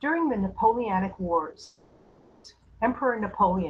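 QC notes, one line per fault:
1.65–2.46 s, call audio freeze: the speech halts and the last sound drags on as a fading buzz or hiss that never reaches silence, then resumes where it stopped, with nothing lost but 0.79 s late. Packets were likely held up, emptying the jitter buffer.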